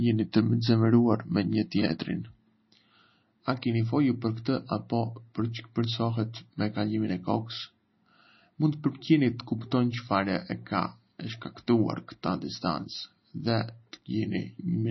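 From start to finish the speech carries the watery, swirly texture of MP3 compression, likely at a very low bitrate near 24 kbps. The treble is cut flat at about 5.9 kHz, and s sounds chirp metallically. A spectrogram shows an empty band above the cutoff and flickering holes below it.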